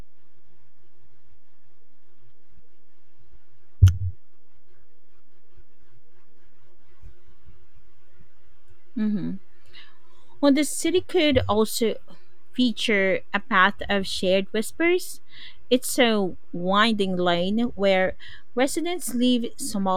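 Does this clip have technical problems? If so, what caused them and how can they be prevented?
Yes. DC offset runs through the whole clip: the speech waveform sits shifted off the zero line by a constant of about -30 dBFS. A constant offset makes no sound of its own, but it eats into headroom on one side of the waveform and appears as a fixed component at 0 Hz in the spectrum. It usually comes from a converter or preamp stage passing a steady voltage. A high-pass filter at a few hertz, or AC coupling at the input, would prevent it.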